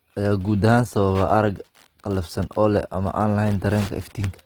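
Throughout the speech the sound is grainy and rough, with tones turned noisy, yet it still extends to 20.2 kHz. This is likely Opus compression in music mode, keeping each band's energy but filling fine detail with noise, which fits a bitrate near 16 kbps.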